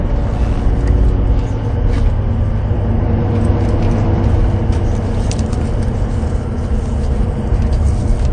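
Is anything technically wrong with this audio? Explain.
Yes. Throughout, the audio is band-limited with nothing above about 9.4 kHz and has a smeared, swirly low-bitrate character. This is likely low-bitrate audio saved at a high bitrate: an MP3 near 48 kbit/s re-encoded around 256 kbit/s, which cannot restore the removed detail.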